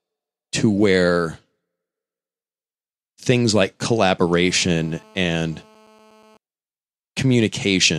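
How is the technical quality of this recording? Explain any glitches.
The recording has one glitch, a GSM phone buzz. From 4.27 to 6.37 s, after "things like", a raspy buzz appears. A nearby phone on a call transmits bursts at 217 Hz. The audio circuit rectifies them into a steady buzz about 31 dB below the speech.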